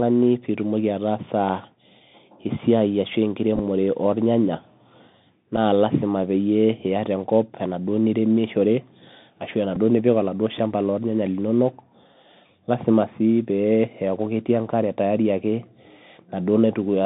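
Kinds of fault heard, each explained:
Bluetooth CVSD headset codec: One-bit delta modulation with an adaptive step, fitting a 64 kbps headset link. It holds the audio to about 150 Hz to 3.7 kHz under a granular hiss, with plainly audible grit on loud, bright sounds, which sets it apart from clean telephone band-limiting.
Bluetooth headset packet repeated: Lost headset packets replaced by re-decoding the previous one. Rather than leaving silent gaps, this gives brief buzzy ticks: a scattered burst at 3.56–3.60 s, a single small tick at 5.57 s, and a slightly longer buzz near 267 Hz at 9.75–9.77 s.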